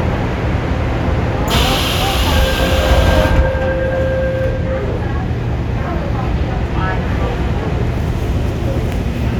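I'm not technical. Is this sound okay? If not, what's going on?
Yes, this one's fine: nothing in it jumps out as a glitch or a problem, so there's nothing to worry about here.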